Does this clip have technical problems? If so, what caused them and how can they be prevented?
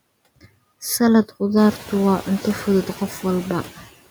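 Yes. Noise suppressor artifacts run throughout. The suppressor cuts steady noise by about 19 dB in the gaps and releases it under speech. On a spectrogram, the background floor appears and vanishes with the speech, most clearly after the room noise rises near 1.5 s. A gentler suppression depth prevents this.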